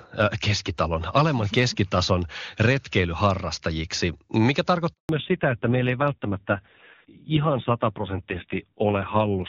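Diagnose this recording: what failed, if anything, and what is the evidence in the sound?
Network stage: a handover gap. Just after "keskitason retkeilyharrastajiksi mikä", the speech stops at 4.93 s and stays silent until 5.09 s. That is 160 ms. No speech frames arrived while the call moved between networks. Whatever was said there is lost.

Codec stage, triggered by the network change: a fallback to narrowband from 5.09 s to the end. Before the gap the speech has clean wideband detail, which fits HD Voice at a high rate. Afterwards nothing remains above 4 kHz. The speech turns duller and rougher. That points to a low-rate narrowband codec, around 5.9 kbit/s.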